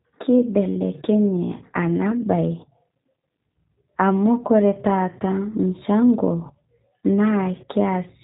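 Throughout, the speech carries plainly audible G.729 codec damage. Nothing above 3.8 kHz survives. The rebuilt speech sounds rough and synthetic, which fits an 8 kbit/s VoIP link.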